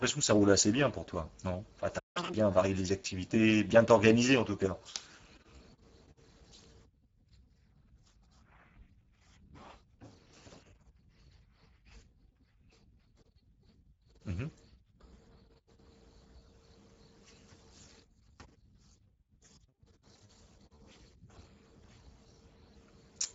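Speech clip, and the Speex codec is audible the whole way through: the voice has that hoarse, grainy CELP texture you get when the excitation is starved of bits, with a fair bit of noisiness riding on it. Nothing comes through above about 7.7 kHz, which fits a wideband Speex mode at a fairly low quality setting, somewhere around 10 kbps. The damage isn't subtle. You'd pick it out as old VoIP or game-chat audio straight away. Then at 1.98 s there's a playback stall: the sound just drops out mid-flow and stays silent until 2.17 s, a gap of about 167 ms. The likely cause is the player running dry on buffered data, or its thread getting blocked for a moment, so output simply stopped until it recovered. Right after that, from 2.17 to 2.34 s, you get catch-up at higher speed. The player races through its backlog at double speed to win back the lost time, so for that short stretch the voice jumps up by roughly ten semitones and sounds chipmunk-fast before dropping back to normal pitch and tempo. 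It's brief, but paired with the gap just before it, it makes a noticeable hiccup near the two-second mark.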